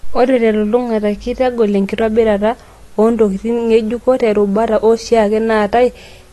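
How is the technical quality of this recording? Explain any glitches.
The recording is held back by plainly audible AAC compression damage across its whole length. The speech sounds dull and smeared, with a watery, fizzy texture on sibilants and sustained sounds, and nothing is heard above about 12.1 kHz. This is likely AAC-LC coding at a low bitrate, around 32 kbps: the encoder lowers its cut-off and quantises the spectrum so coarsely that bands drop out or fill with substitute noise.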